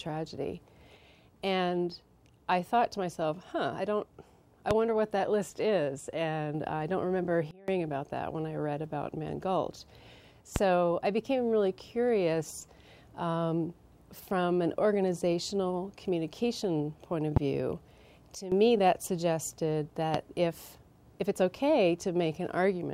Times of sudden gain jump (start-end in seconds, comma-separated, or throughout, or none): 7.51-7.68, 18.35-18.52